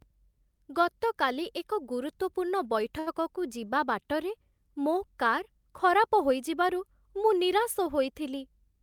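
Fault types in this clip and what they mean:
Short stall from a late packet: a packet arrived late, so the receiver held the sound from 2.99 to 3.09 s after "ଗତକାଲି ଏକ ଗୁରୁତ୍ୱପୂର୍ଣ୍ଣ", about 73 ms, showing a smeared, repeated harmonic stretch.
Jitter buffer speed-up: from 8.43 to 8.81 s the speech runs about 8% fast at unchanged pitch, with roughly 40 ms trimmed, leaving fewer pitch periods in the waveform.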